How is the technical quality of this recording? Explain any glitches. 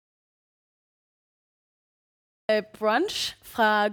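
The recording has one clear fault: an audio dropout to silence that is already under way when the clip begins. From the start until 2.49 s, the signal is silence, most likely because the input was lost while the recorder kept writing zeros. The waveform is a flat line and the spectrogram is completely blank, with no room tone, before the speech begins abruptly.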